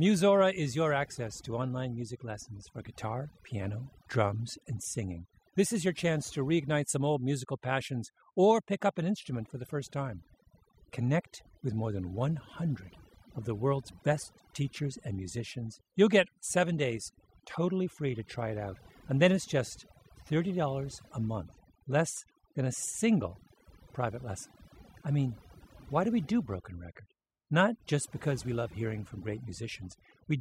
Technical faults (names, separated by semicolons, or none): overdone noise removal